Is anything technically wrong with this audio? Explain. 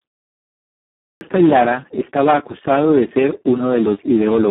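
Yes, two faults are audible.

The Speex codec affects the whole clip. The speech sounds hoarse, noisy and partly robotic, with heavy codec damage. This fits a very low setting, around 4 kbps, where the excitation gets almost no bits and the coder behaves nearly like a vocoder. The band runs from about 150 Hz to 3.4 kHz, and nothing is present above 3.8 kHz, so the speech is thin and muffled.

A clipped start after a pause occurs at 0.88 s, after 0.88 s of silence from the beginning. The first 330 ms of sound, up to 1.21 s, is swallowed, and speech begins abruptly mid-sound without its onset. The output device went idle during the silence and needed about a third of a second to wake and lock before it passed audio again.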